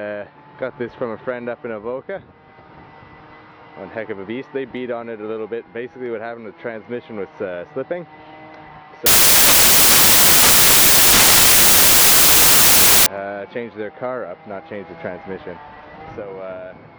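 Samples built from the wrong bytes run from 9.06 to 13.06 s. For those four seconds the reader assembles each sample from mismatched bytes, so the rapidly changing low-order bits dominate every value and the sound becomes loud, harsh broadband noise, close to white on louder passages.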